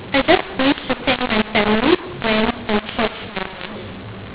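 Throughout the speech, a mu-law and A-law mix-up corrupts the G.711 telephone signal: samples coded as mu-law are expanded with the A-law curve. Levels come out scrambled, so the speech is harsh and distorted, and pauses fill with noise instead of falling silent.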